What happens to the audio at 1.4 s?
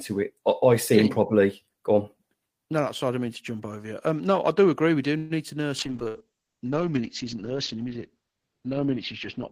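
Nothing goes wrong at 1.4 s; the speech carries on intact through that moment, with no dropout, click or distortion.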